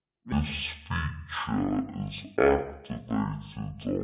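From 0.32 s to the end of the clip, the speech plays with a wrong sample rate. It runs at half speed and drops a full octave, twelve semitones. That fits 16 kHz audio played back at 8 kHz. Voices sound low, slow and dragged.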